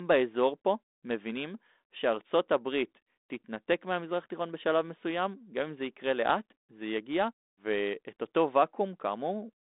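Nothing stood out on listening to this speech, which comes through as band-limited telephone audio over 32 kbit/s G.726 with nothing heard above about 3.9 kHz.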